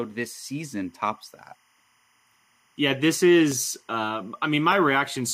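A faint, steady chirping warble runs under the speech from start to finish, sitting roughly 40 dB below it and flipping between two pitches around 1 kHz and 2 kHz. This is timecode bleed: linear timecode, here running at 25 frames per second, has leaked from an adjacent track or cable into the audio path. Its square-wave signal toggles between those two tones as it encodes each bit, so it shows up as a constant buzzy twitter.

At 3.52 s and again at 4.72 s there is a single sharp click, each one a thin vertical stripe across the spectrum. The gap is only a fraction of a millisecond, far too short to remove any sound, so the clicks are likely dropped samples. A tiny run of samples went missing, and the waveform leaps straight to a later value, producing the abrupt discontinuity heard as a tick.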